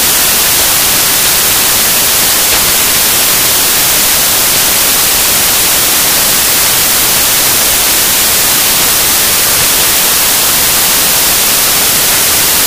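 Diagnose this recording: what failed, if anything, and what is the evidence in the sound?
The failure is in sample-format conversion: samples built from the wrong bytes, present throughout. The bytes of each sample are assembled misaligned or in swapped order, so the rapidly changing low bits land in the most significant positions and the audio becomes loud, harsh broadband noise.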